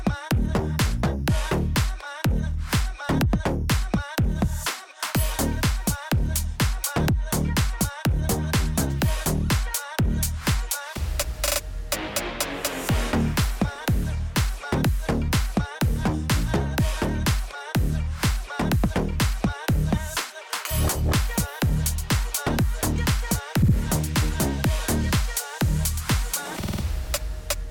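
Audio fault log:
13.75 to 13.77 s, 23.62 to 23.74 s and 26.61 to 26.82 s, repeated frames: a stretch of compressed audio is decoded again, causing a stutter. A 20 ms block replays once at 13.75 s, 60 ms twice at 23.62 s, and 50 ms four times, adding 200 ms.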